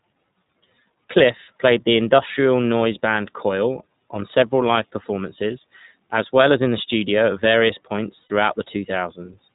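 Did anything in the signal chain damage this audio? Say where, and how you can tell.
Yes. At the codec stage, the iLBC codec audibly damages the whole clip. Nothing passes above 4 kHz, and the speech sounds rough and synthetic, which fits 15.2 kbps with 20 ms frames.

At the network stage, lost iLBC frames hit at 8.22 to 8.32 s. The decoder repeats the last pitch cycle with noise, so the gap sounds like a held, buzzy vowel. The speech recovers almost at once.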